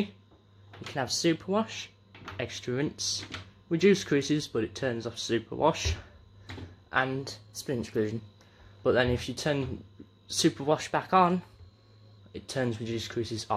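A clock-matching stage likely stepped the playback rate to rebalance its buffer, a drift correction step. At 0.82–1.75 s, 7.19–8.19 s and 10.71–12.19 s the sound runs 6.2% fast and rises 104 cents, about a semitone, then snaps back.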